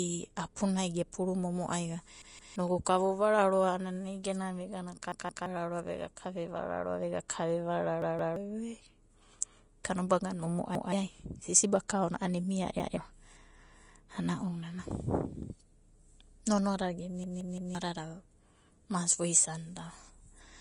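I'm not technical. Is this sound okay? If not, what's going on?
No. There are three problems.

The first is Vorbis compression, and it runs the whole way through. Vorbis is a way of shrinking audio files. Here it is likely the cause of the dull, grainy sound of the speech. Everything above about 10.5 kHz is gone, so the crisp, airy top end is missing. Fine detail in the higher sounds has turned into hiss. The edges of sounds also come across blurred.

The second is a repeated buffer. The playback system ran short of new audio and played the last short chunk again. Each chunk lasts about 0.17 seconds. You hear a stutter at 2.22, 5.12, 8.02, 10.75, 12.80 and 17.24 seconds. At the first three, the chunk plays three times in a row. At 10.75 and 12.80 it plays twice. At 17.24 it plays four times. Each stutter also skips real audio, from about a sixth of a second up to about half a second.

The third is pre-echo, a brief one at 11.88 seconds. 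The shrinking process handles sound in small blocks. A sudden sharp sound late in a block lets hiss leak into the quiet moment just before it. Here that hiss lasts about 13 milliseconds. It makes the start of the sharp sound feel softened.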